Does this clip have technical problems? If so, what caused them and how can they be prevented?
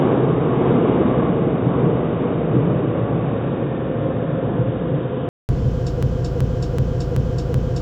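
Yes. From the start to 5.49 s the sound is dull and boxy, with nothing above 3.8 kHz and a level about 5 dB lower than afterwards, followed by about 200 ms of silence before it clears. This is likely an input switched to a poorer device, such as a headset's call profile, whose narrow band and own noise floor set in until the system switched back to the better input. Locking the recording to one fixed input device and disabling automatic device switching prevents this.

From 6.03 s to the end, a 0.38 s fragment repeats exactly, back to back, five times, like a broken-record loop. The likely cause is a stalled player, encoder or stream that kept resending the last buffered fragment, so the audio that should have followed is lost. Giving the capture and encoding chain enough buffer headroom and monitoring for stalls prevents this.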